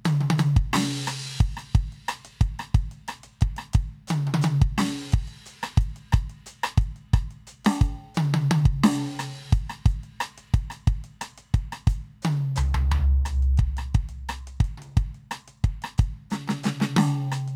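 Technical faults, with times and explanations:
Nothing technical goes wrong anywhere in this bit of music, so there's nothing to flag.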